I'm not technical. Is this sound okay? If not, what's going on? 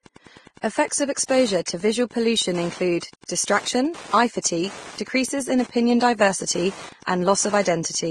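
No. Throughout the recording there's Wi-Fi interference: a faint, steady ticking about ten times a second, once every 102.4 ms, unlike the smooth, continuous tone of electrical hum. The speech also sounds dull, with nothing above 12 kHz and two different kinds of smearing layered together, most likely from transcoding between lossy codecs rather than a single round of compression.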